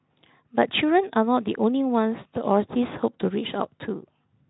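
Speech with no technical faults that a listener can hear.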